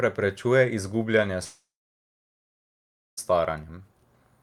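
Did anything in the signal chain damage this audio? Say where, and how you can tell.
Yes. At 1.43 s the speech breaks off into a fading buzz, then roughly 1.5 s of silence until it resumes at 3.19 s with about 1.7 s missing. That points to a long network dropout, likely from lost packets, with the receiver's concealment filling the gap before muting.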